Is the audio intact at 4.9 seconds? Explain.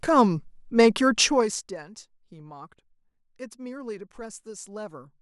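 Yes, at 4.9 seconds the speech is intact, with no fault at that moment.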